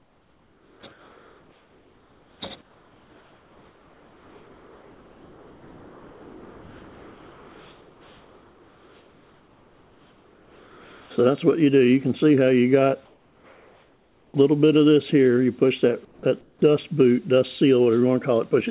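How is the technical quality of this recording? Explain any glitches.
The recording has two kinds of fault, both tied to how silence is handled on a call. It comes through a narrowband call path with nothing above 4 kHz, which fits G.711 A-law at 64 kbps.

Comfort noise in place of the background occurs at 0.0–0.83 s, 0.92–2.4 s, 2.61–11.1 s, 13.05–14.34 s and 16.41–16.62 s. In these gaps the real background vanishes. A smooth, featureless hiss stands in for it, about 3 to 8 dB quieter. The likely cause is discontinuous transmission. The sender stops sending when its voice detector hears no speech. The receiver then generates shaped noise until audio resumes.

Sound dropped by the voice detector occurs at 16.05–16.23 s. Here actual sound is cut, not just background. About 90 ms of it is lost, and steady noise fills the 180 ms gap. The detector likely judged a quiet stretch to be background and stopped sending. 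Comfort noise covered the hole until the detector triggered again. The result is a brief clipped patch where the sound thins into hiss.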